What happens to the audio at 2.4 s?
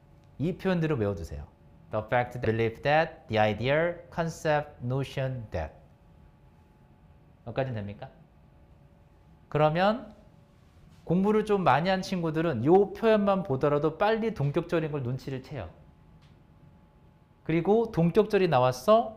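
At 2.44 s there's a skip ahead: about half a second of audio got dropped, probably on the way or in an overflowing jitter buffer, and playback jumps straight to later sound with no gap.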